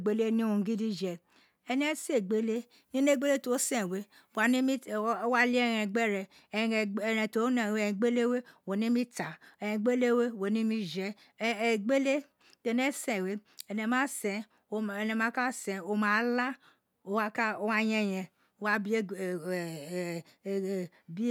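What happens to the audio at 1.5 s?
Nothing goes wrong at 1.5 s; the speech carries on intact through that moment, with no dropout, click, distortion or other fault.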